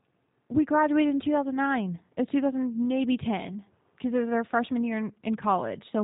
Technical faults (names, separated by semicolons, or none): G.729 codec